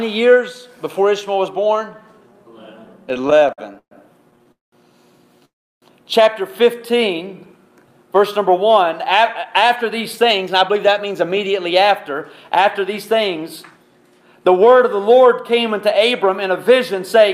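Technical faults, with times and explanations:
3.09–3.93 s and 4.31–4.52 s, repeated stalls (stutter): the sound drags and catches in short repeated hitches. There are 13 gaps in the first stretch, the longest 125 ms, and 5 brief ones in the second. Packets kept arriving late, so the jitter buffer emptied repeatedly and the receiver stretched the last sound until data resumed. Nothing is lost.
4.52–4.74 s and 5.45–5.84 s, call audio freeze: the sound halts, briefly continues as a fading buzz, then goes quiet for about 170 ms and 330 ms before resuming where it stopped. The likely cause is packets held up in transit, draining the buffer. The receiver filled 206 ms and 367 ms, so a gap was inserted rather than anything removed.
6.74–7.35 s, jitter buffer slow-down: the audio plays at about 91% speed with unchanged pitch, so sounds are slightly drawn out. The buffer was low, and the receiver repeated single pitch periods or slices of pause to build a reserve, adding 62 ms.
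9.22–13.79 s and 16.29–17.16 s, jitter buffer speed-up: the audio runs faster at the same pitch, about 108% speed in the first stretch, where it sounds hurried, and 104% in the second. The buffer held too much audio, so the receiver cut short pitch-period pieces, removing roughly 0.4 s and a few tens of milliseconds.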